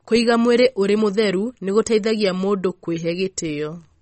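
Heavy MP3 compression at a low bitrate, likely around 32 kbps, runs through the whole speech clip. Starved of bits, the encoder removes everything above 8.4 kHz, dulling the s sounds, and drops weaker frequency lines frame to frame, giving a plainly audible watery swirl and smeared onsets.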